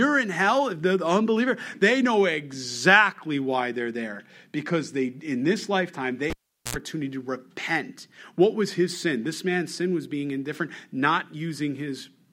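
At 6.30 s, just after "in this lifetime they", a live cable was pulled and plugged in again: a pop, about 0.41 s of near silence, then roughly 85 ms of 60 Hz mains buzz as the tip touches, and a second pop before "to repent" at 6.77 s.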